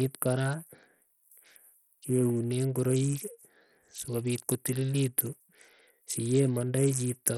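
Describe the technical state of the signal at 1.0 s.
At 1.0 s the speech carries heavy coding damage that runs through the whole clip. The treble flickers and drops away, with gritty noise and aliasing on top. This sounds likely to be Bluetooth SBC compression starved of bits, which fits a low bitrate around 64 kbps.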